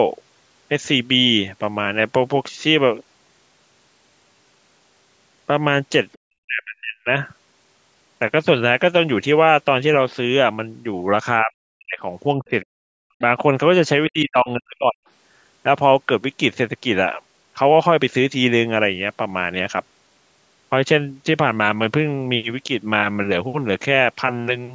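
At 6.12 s there's a brief scrap of the other side's voice leaking through, just a few hundredths of a second and very faint, around 35 dB below the talker. It's most likely loudspeaker echo the canceller didn't fully remove, so a bit of the far end slips into the mic path as a quiet ghost before the main trouble starts.

Right after, from 6.22 to 7.07 s, the talker's speech is suppressed in double talk. The level falls away by something like 40 dB, and most of that stretch sounds choked off or missing. The same thing happens at 11.42 to 11.99 s, 12.38 to 12.9 s, a tiny dip at 13.17 s, and 14.08 to 15.02 s. The likely cause is both sides talking at once: the echo canceller couldn't separate the near talker from the echo, so it ducked everything.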